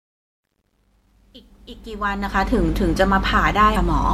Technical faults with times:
0.00-4.13 mains hum
0.00-2.58 truncation distortion on a fade
3.73-3.77 damaged data in a compressed stream

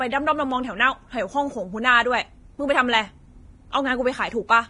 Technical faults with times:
0.00-4.69 Vorbis compression

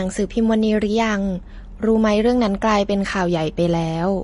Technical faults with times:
0.00-4.24 MP3 compression

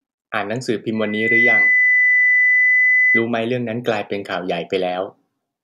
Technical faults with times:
0.95-3.29 loudspeaker feedback squeal

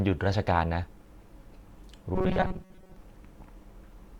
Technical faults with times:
2.15-2.96 robotic sound from repeated short buffers

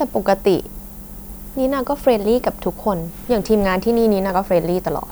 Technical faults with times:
0.00-5.11 low bit depth with noise shaping

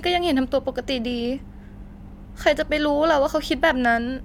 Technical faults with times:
none

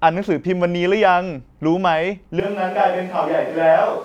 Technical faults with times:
2.40-4.04 switch to a distant microphone

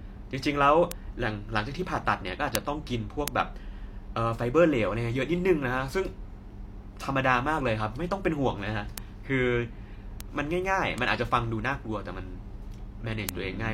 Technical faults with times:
0.92 bit error spike
2.55 bit error spike
3.28 bit error spike
8.98 bit error spike
10.20 bit error spike
10.98 bit error spike
13.29 bit error spike

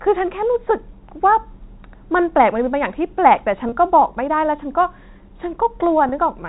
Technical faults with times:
3.69-3.72 packet loss with pitch repetition
6.09-6.12 packet loss with pitch repetition

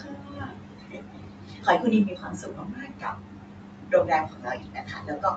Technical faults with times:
0.00-5.37 noise suppressor artifacts
0.00-5.37 speech cut by the noise suppressor

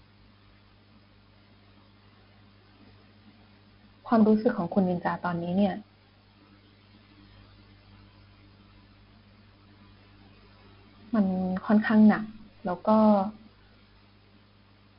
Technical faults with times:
0.00-14.98 4-bit ADPCM compression

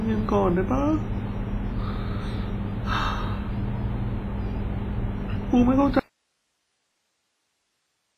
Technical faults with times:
0.00-8.18 WMA compression
5.99-8.18 audio dropout to a faint residue

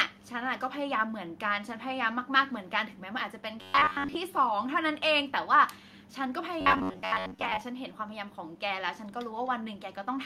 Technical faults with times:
3.62-4.17 robotic sound from repeated short buffers
6.61-7.61 robotic sound from repeated short buffers

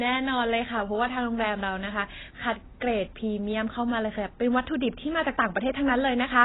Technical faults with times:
0.00-6.45 AAC compression

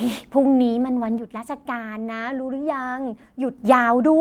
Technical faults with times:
1.18-3.58 one channel drops out

